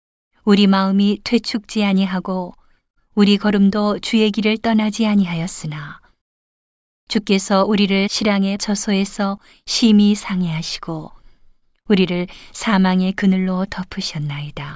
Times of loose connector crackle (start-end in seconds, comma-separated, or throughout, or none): none